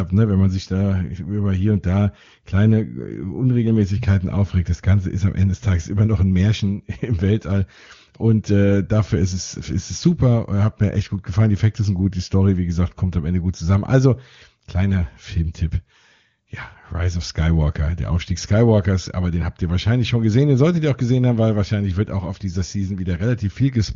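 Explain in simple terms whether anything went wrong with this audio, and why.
Nothing went wrong here: the speech comes over an HD Voice phone link (the AMR wideband codec) running at one of its higher settings, where the codec leaves at most faint traces, so there's nothing to point at.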